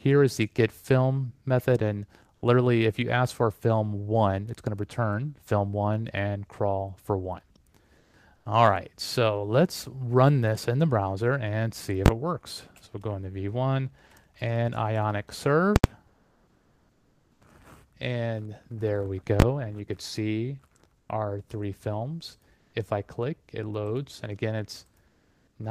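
The quiet background between sounds, sitting about 37 to 42 dB below the loud passages, is repeatedly swapped for comfort noise in place of the background at 7.97–8.13 s, 8.35–8.45 s, 16.07–17.41 s, 20.97–21.09 s, 22.57–22.73 s and 25.07–25.55 s. The likely cause is discontinuous transmission: the sender goes quiet, and the receiver fills the gap with steady, featureless synthetic hiss. The level shifts are about −3, −2, −5 and −8 dB for the first four spans, about +1 dB at 22.57 s, and no change at 25.07 s. Unlike a dropout or a noise gate, the gap is never true silence; the texture goes flat while noise continues. Separately, invalid numbers at full scale appear at 12.06–12.08 s and 19.40–19.42 s, where each 20 ms block is heard as a single hard bang. At 15.76–15.84 s an 80 ms block gives a loud pop at each end with nothing between. This differs from ordinary clipping, which flattens the peaks of existing sound. 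Here, invalid values in the calculation pin the output rigidly to one extreme value for the whole block.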